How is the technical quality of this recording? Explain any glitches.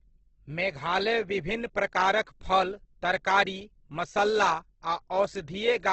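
The technical quality is poor, with heavy codec damage from start to finish.

Across the whole clip the speech is rough and grainy, and nothing is present above about 8.1 kHz. The likely cause is Opus compression in its music (CELT) mode at wideband bandwidth. The grain and the 8.1 kHz ceiling fit a very low bitrate of around 12 kbps. Short of bits, the encoder still preserves each band's overall energy but refills the detail by folding lower bands upward or by inserting noise. That keeps the spectrum filled but grainy. MP3 damage differs: it leaves holes in the spectrum that swirl and warble.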